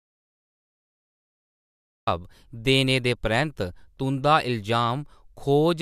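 A speech recording that opens in an audio dropout to silence: from the very start until 2.07 s there is nothing at all, not even room tone, before the speech arrives mid-flow. On a waveform that stretch is a flat line, and on a spectrogram it is solid black across every frequency, ending in a hard vertical edge. The likely cause is an input lost to a disconnected device, failed link or mute while the recorder kept writing silence, so whatever came before 2.07 s is gone.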